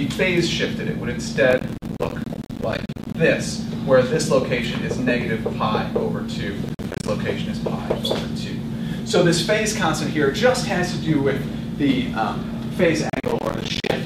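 Three bursts of processor overload crackle, at 1.51–3.15 s, 6.69–7.08 s and 13.10–13.92 s, where the audio keeps dropping out in short silent gaps, which fits buffers of roughly 10 ms missing their deadlines.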